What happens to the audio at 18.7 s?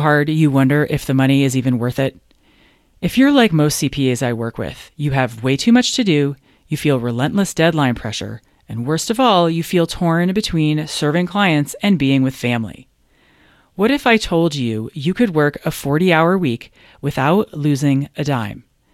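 At 18.7 s the audio is still under channel delay (comb filtering), which starts at 1.53 s after "wonder if the money" and runs to the end. One channel lags by roughly a sample before the mono sum, putting the first cancellation notch near 20 kHz. The speech sounds slightly dull rather than hollow. Unlike a low-pass filter, the top end sags gradually toward that notch instead of cutting off sharply.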